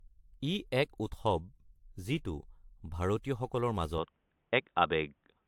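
Across the whole clip, the speech shows generation loss, likely from being decoded and re-encoded around seven times through a lossy codec whose character fits AAC-LC at 96 kbit/s. Each pass quantised the signal on a shifted frame grid, so the errors stacked: the speech sounds swirly and hollow, consonant attacks are smeared, and the top of the spectrum stops at 19.3 kHz. The damage is heavier than a single encode at that rate would leave.

At 3.98 s, with no gap, the input switched to a poorer device, likely a different microphone or a headset's call profile taking over. From there to the end at 5.47 s, the band closes off above 3.8 kHz, so the speech turns dull and boxy. The level shifts by about 5 dB, and a new noise floor sits about 50 dB below the speech.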